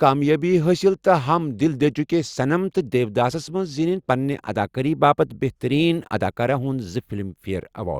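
Nothing stood out as a technical fault on listening to this speech recording.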